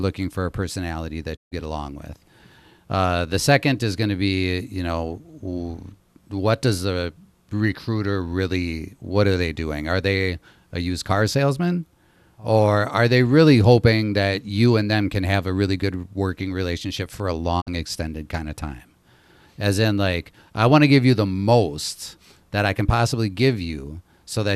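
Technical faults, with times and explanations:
1.35–1.53 s and 17.60–17.69 s: digital broadcast dropout. After "for a personality" the speech fades out over 20 ms and goes silent for 144 ms, which fits six lost frames. After "working relationship for a", a 48 ms gap fits two. The receiver muted on bad frames, so that audio is lost.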